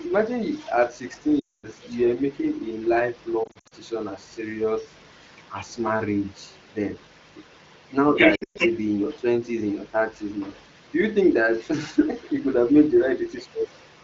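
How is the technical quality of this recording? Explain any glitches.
The recording has two recurring faults: a second voice leaking in behind the speech, and several short dropouts. The wideband phone codec sounds clean and full, with only light coding texture.

Other side's voice leaking through occurs from 0 to 5.47 s, 6.26 to 9.18 s, 9.87 to 11.69 s and 12.22 to 14.04 s. A second voice sits under the main speech. It is faint at about −30 dB in the first and last stretches, and about −25 dB from 9.87 s. From 6.26 s it is about as loud as the speech itself. The likely cause is the talker's loudspeaker feeding the far end back into the microphone, with the echo canceller failing to remove it.

Lost AMR speech frames occur at 1.39 to 1.67 s, 3.44 to 3.74 s and 8.35 to 8.58 s. Radio errors corrupted frames, so the decoder filled the gaps by repeating the last good sound at falling level. 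The first gap loses 240 ms, long enough to drop to near silence. The second is scattered, with runs no longer than 60 ms, so it sounds like a brief warble. The third has a 120 ms run that drops to near silence before the speech returns rough.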